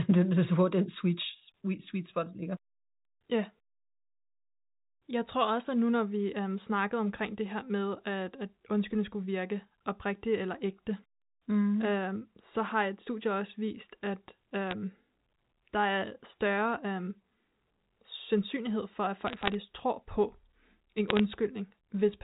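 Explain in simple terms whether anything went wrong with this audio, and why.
Three short bursts of bit errors on a digital phone line show up in this telephone-quality speech. A few bits in the digital stream got flipped, so individual samples jump to wrong values and you hear sharp ticks and crackle over the speech. The first, brief one is at 14.67–14.72 s, right after "studie også vist at". The longest and densest is at 19.27–19.54 s, between "sandsynlighed for at" and "tror på". The last is at 21.08–21.20 s.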